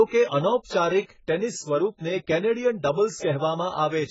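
Throughout the speech, the sound is dull and smeared, with a fizzy, warbling edge on sibilants, likely from heavy AAC compression at a very low bitrate. A spectrogram shows nothing above 7.7 kHz.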